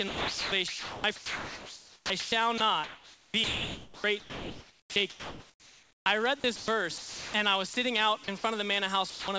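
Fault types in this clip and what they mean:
Sound chopped by the voice detector: sound flickers in and out, likely the sender's detector toggling, so the spectrogram alternates real energy with flat, featureless noise patches.
Sound dropped by the voice detector: sound gives way to steady hiss, likely judged as background, and the waveform sinks to a flat, even noise floor until sound resumes.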